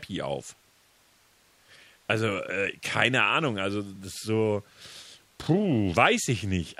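No technical faults are audible anywhere in the speech recording.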